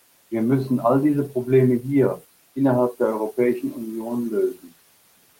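Speech cut by the noise suppressor occurs from 4.54 to 4.72 s in this short speech recording, where the suppressor mistakes a soft stretch of speech for background and pulls it down along with the noise floor by about 15 dB at its deepest. Roughly a sixth of a second of sound is affected, so the speech there comes across swallowed and faint. The room noise, sitting about 21 dB below the speech, belongs to the recording space itself.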